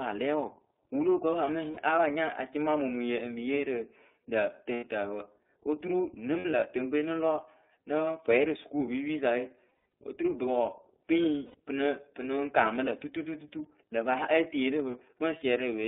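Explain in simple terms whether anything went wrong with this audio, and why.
The call was squeezed through the iLBC codec, a narrow telephone-style coder, so nothing above about 3.6 kHz survives and the speech sounds thin, rough and slightly synthetic throughout.

Some data packets also went missing, causing lost iLBC frames. The decoder filled each hole by repeating the last bit of voice, so you hear a brief buzzy, held sound before normal speech snaps back. This happens at 1.71 to 1.77 s, 4.74 to 4.84 s, in scattered bits from 6.38 to 6.64 s, at 9.69 to 9.80 s between "pwɛyɩ rɨ sukuupipisa we" and "oturu bɨ", at 11.45 to 11.58 s just before "pɨ nɨ pɨ", and at 14.91 to 14.95 s.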